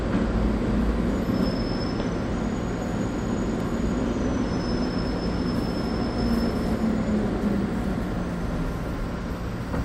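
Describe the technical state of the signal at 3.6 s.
At 3.60 s there is a repeated buffer. New audio failed to arrive in time, so the device replayed its last block instead. That block lasts about 1.3 ms, which fits a 64-sample buffer. It plays three times in a row, with a hard join at each repeat. About 3 ms of the real sound is lost in its place. The pieces are so short that the stutter is heard as a brief click or buzz.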